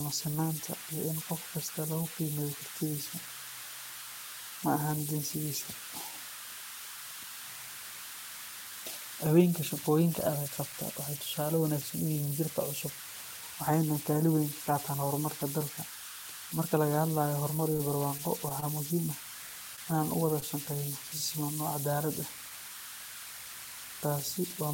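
Converter idle tones run through the whole speech clip. The converter appears to lack dither, so with small inputs it settles into repeating bit patterns. These form a whistle around 1.5 kHz in the pauses, with grainy noise under the quiet passages. The error sits at about 9 dB below the signal, so it stays close to the audio throughout.

At 17.73 s a short concealed packet loss begins and lasts until 17.77 s. About 20 ms of audio never arrived. The receiver carried the last sound forward for about 13 ms, then blended back into the real signal. It is heard as a brief smear.

A short stall from a late packet follows at once, from 17.77 to 17.81 s. The jitter buffer ran dry. The last sound was stretched about 26 ms until the packet came. Nothing is missing, but the sound holds too long with a slight buzz. The same fault returns three more times. At 18.60 s the hold is about 20 ms. At 19.76 s it is about 16 ms. 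At 20.40 s, just after "u wada", it is about 22 ms. Each one is a brief stretched sound with a faint dip.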